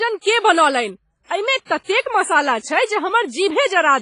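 All the way through, the speech sounds heavily coded, washy and ringing with hiss breathing under it and nothing above 10.1 kHz, most likely WMA compression at a low bitrate around 24 kbps. At 1.65 to 1.69 s there's pre-echo: block-spread quantisation noise leaks about 42 ms ahead of a sharp attack, giving a brief hiss and a smeared onset.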